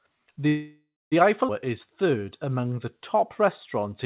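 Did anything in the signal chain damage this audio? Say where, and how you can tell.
Yes, three problems show up, all at the network and jitter-buffer stage of a call path. The path itself is band-limited to 4 kHz, with the coding noise of G.711 A-law at 64 kbps.

A call audio freeze runs from 0.48 to 1.15 s. The sound stalls, the last fragment trails off as a decaying buzz or hiss, and about 230 ms of that is silence. The speech then resumes exactly where it stopped, so nothing is lost and roughly 0.64 s of extra delay is inserted. That resumption is what separates it from a dropout, which would remove material. Packets likely stalled in transit and the jitter buffer ran dry, forcing the receiver to improvise a fill.

A skip ahead occurs at 1.48 to 1.51 s. Here the opposite happens: roughly a third of a second of speech vanishes, and the two sides are butted together with only an 8 ms fill. 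There is no stall or fading buzz, just an abrupt jump in the content. That signature points to the jitter buffer discarding a stretch to recover the delay it had just built up.

A jitter buffer slow-down spans 1.65 to 3.90 s. The speech plays at about 93% speed, with drawn-out vowels, adding 173 ms overall. Pitch stays the same, which rules out a clock or sample-rate mismatch, since that would lower the pitch along with the tempo. The receiver was repeating individual pitch periods to rebuild its reserve.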